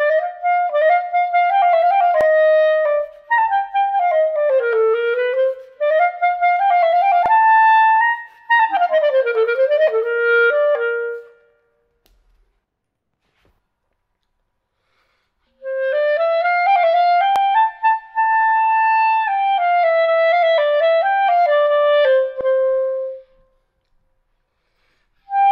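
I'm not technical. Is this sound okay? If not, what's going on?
No. At 2.21, 7.26, 17.36 and 22.41 seconds there is a brief stutter, as if the sound hiccups: a tiny 50-millisecond piece plays twice. This is called overlapping chunks. The audio was handled in 5-second blocks, and each new block began slightly before the previous one finished, so the short stretch where they overlap gets repeated at the joins.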